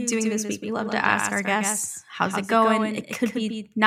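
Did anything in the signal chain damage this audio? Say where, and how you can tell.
Yes. The speech is carried by a doubled audio track, likely from a second, slower capture path mixing the same signal back in. Throughout the clip, a full-band copy trails by roughly 150 ms, a few decibels quieter, with no decay or room colour, so every syllable has a dry, flat echo.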